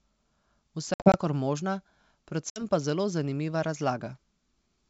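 Between 0.94 and 1.18 s the speech breaks up into hard-edged silent gaps from packet loss on an ADPCM call: about 120 ms goes missing across a 200 ms stretch, with the longest gap 60 ms, spread over roughly seven packets. A further 60 ms is lost at 2.50 to 2.62 s. When sound resumes after each gap, it comes back slightly distorted, because the decoder's adaptive predictor and step size have drifted from the sender's and need tens of milliseconds to realign. That uneven re-entry is what separates it from plain dropouts, which resume cleanly, and from concealed loss, which fills the holes instead of leaving silence. The wideband G.722 coding around the gaps carries speech up to 7 kHz, with little sign of coding damage, which fits the 64 kbit/s mode.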